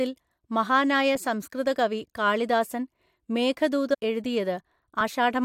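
Compressed frames skipped in this speech recording at 3.93 to 3.95 s: about a tenth of a second of audio never plays, so the speech jumps ahead at the join.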